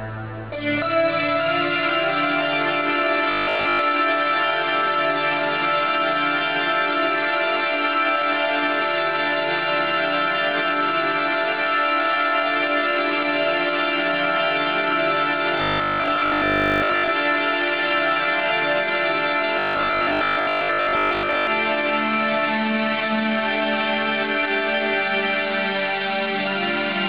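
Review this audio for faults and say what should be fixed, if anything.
A rigid, metallic buzz at 50 Hz is heard from 3.31 to 3.79 s, 15.58 to 17.10 s and 19.59 to 21.47 s. This is robotic sound from repeated short buffers, likely from a 20 ms chunk being replayed while most of the real audio is skipped. To prevent it, enlarge the playback buffer or fix the stalled audio delivery so new data arrives in time.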